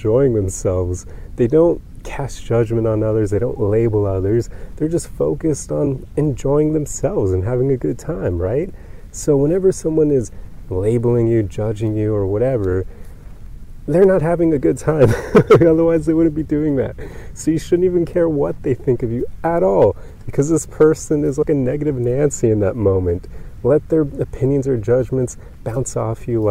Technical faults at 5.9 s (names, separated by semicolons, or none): compressed frames skipped